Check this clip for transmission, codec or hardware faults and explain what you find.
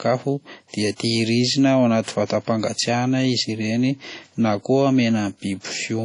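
One codec fault runs through the whole speech clip. Throughout, the sound rings and washes, with hiss breathing alongside the speech. Nothing is heard above 10.1 kHz. The likely cause is WMA compression at a low bitrate, around 32 kbps. Its long transform blocks smear quantisation noise in time and zero the weaker detail.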